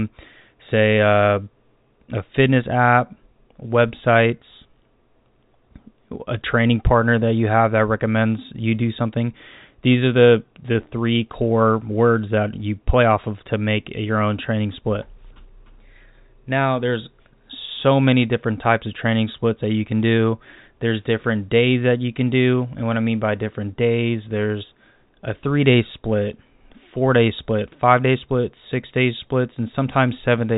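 Nothing goes wrong anywhere in this speech, which simply carries the narrow, phone-line character of G.711 telephone coding, with everything above 4 kHz absent as that format always has it.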